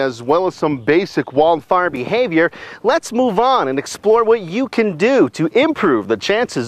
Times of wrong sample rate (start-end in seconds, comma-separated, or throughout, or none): 0.00-1.63